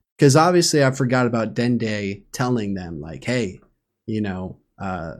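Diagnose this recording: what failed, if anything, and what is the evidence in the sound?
Nothing stood out on listening to this speech recording that would point to a failure at any stage of the chain.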